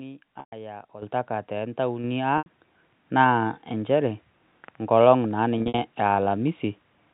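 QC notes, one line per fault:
0.40–0.52 s, packet loss with pitch repetition: 120 ms of audio is missing. The receiver loops the last pitch period to fill the gap, producing a held, buzzy tone that fades before the speech resumes.
1.02 s, microphone volume stepped up: voice and background jump together by about 10 dB as the input volume is raised in one abrupt step.
2.04 s, microphone volume stepped up: a second, smaller step of about 4 dB lifts voice and background at the same instant, a sign of device gain rather than the talker.
2.38–2.46 s, packet loss with pitch repetition: an 80 ms gap is bridged by repeating the last pitch cycle, heard as a brief buzzy hold before a short cross-fade back into speech.
5.58–5.78 s, packet loss with pitch repetition: just after "enkolong' naa", 140 ms of losses are scattered over 200 ms, the longest run 60 ms. Each is patched with repeated pitch periods, giving a stuttering, buzzy texture.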